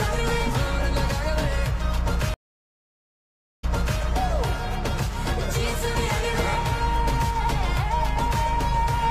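At 2.34 s a stream reconnect drops the sound for 1.25 s; playback then restarts about 0.42 s earlier, replaying material already heard, and the event ends at 4.01 s.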